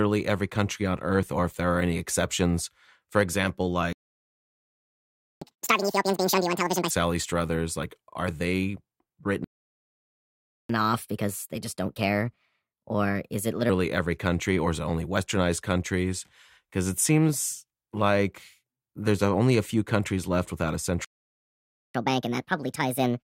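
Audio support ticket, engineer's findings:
Playback stall: speech cuts to silence at 3.93–5.42 s (1.49 s), 9.44–10.69 s (1.25 s), 21.05–21.95 s (0.90 s). Output resumes where it stopped. Likely a player buffer underrun or blocked output thread.

Catch-up at higher speed follows each stall. At 5.42–6.90 s the speed is 2× and the pitch rises roughly ten semitones. At 10.69–13.69 s it is 1.25× and about four semitones. From 21.95 s to the end it is 1.5× and about seven semitones. The resampler drains the backlog, so speed and pitch rise together.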